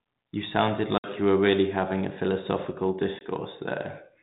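Packet loss on an ADPCM call: at 0.98 to 1.09 s about 60 ms of several packets vanishes, and at 3.19 to 3.24 s about 20 ms, a couple of packets, drops out. Silence fills each hard-edged hole, the decoder's predictor and step size lose sync, and speech returns with brief distortion.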